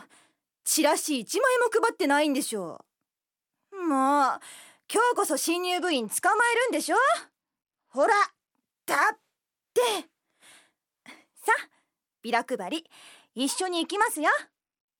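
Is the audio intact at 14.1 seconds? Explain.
No. From 13.53 to 14.88 s a Bluetooth SBC bit pool drop squeezes the encoder, which fits a bit pool cut from 31 to 12, near 88 kbps. The top sub-bands starve and the rest quantise coarsely, so treble dulls and gritty noise rises.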